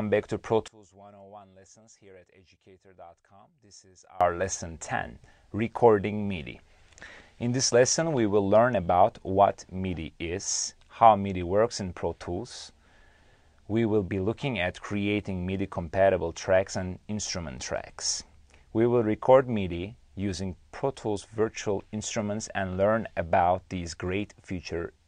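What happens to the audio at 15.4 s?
Nothing goes wrong at 15.4 s; the audio plays through that moment intact, with no dropout, click, glitch or other fault to be heard.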